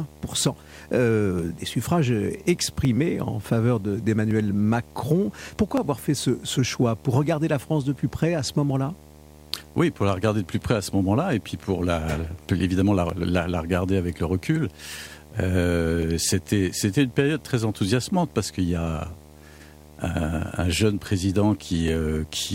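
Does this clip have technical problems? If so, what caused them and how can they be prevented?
Yes. Video or display buzz runs throughout: a 75 Hz buzz with hash above it, about 25 dB below the speech, from a screen or video cable coupling into the audio path. Keep audio cables away from monitors and video leads, and use balanced, properly grounded connections.

Clock drift buffer slips appear as regular clicks every 1.46 s from 1.39 s to 21.88 s, about fifteen in all. The likely cause is two devices on independent clocks differing by roughly 500 ppm, so a few tens of samples are dropped or repeated each time the buffer overflows or runs dry. Lock all devices to a single word clock, or use an interface with asynchronous sample-rate conversion.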